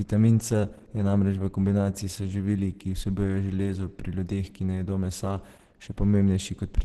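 Throughout this speech recording the sound is muffled and hoarse, with nothing above 12.2 kHz, pointing to likely Opus compression in its hybrid speech mode at a rate around 12 kbps. Unlike MP3, there is little swirling and few bubbly holes, just heavy roughness.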